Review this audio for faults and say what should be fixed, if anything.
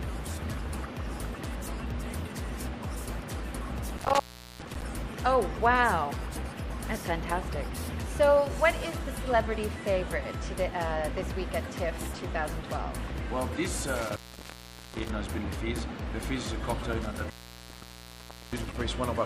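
Intermittent contact cuts the sound out at 3.97–4.82 s (open about 0.40 s), 13.95–15.15 s (0.78 s) and 17.01–18.80 s (1.23 s): a loose plug or cable briefly breaks the circuit, so crackle marks each edge and faint hiss remains. A digital dropout would instead give clean, silent gaps. Reseat or replace the cable and connectors, and secure them with strain relief.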